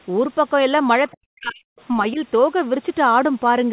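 From 1.12 to 1.66 s the talker's level drops sharply, by about 40 dB at its deepest. This is speech suppressed in double talk, likely from the echo canceller turning down both sides at once. At 1.78 to 1.82 s a brief, faint scrap of the other side's voice leaks through, about 35 dB below the talker, likely because echo removal fell short. From 2.13 to 2.2 s a shorter, milder dip of about 10 dB follows in the same way.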